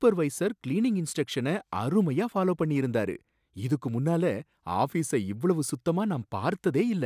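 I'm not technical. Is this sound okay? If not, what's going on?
Yes, nothing stood out as a problem when listening to this recording.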